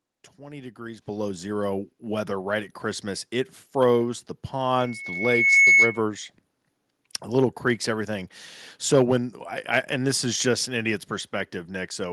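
At 1.02 s the microphone volume is stepped up. The call software judged the input too quiet and raised the device gain in one jump, by about 8 dB. Voice and room tone rise together, abruptly, with no fade. At 2.04 s it happens again, a smaller step of about 3 dB, just before "right at". Each step lifts the whole sound at once, so the change is heard as a sudden shift in loudness.

From 4.78 s to 6.02 s there is a loudspeaker feedback squeal, starting just after "froze the". The microphone is picking up the speaker it feeds. At 2.2 kHz the loop gain passes one, so that tone keeps reinforcing itself. It swells over a little under a second into a piercing whistle. At its peak it sits roughly 10 dB above the speech. Then it stops.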